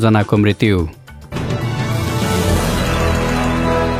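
At 1.22 s, the adaptive stream drops to a lower bitrate without a gap. Treble above 14.9 kHz vanishes, which points to HE-AAC near 20 kbit/s.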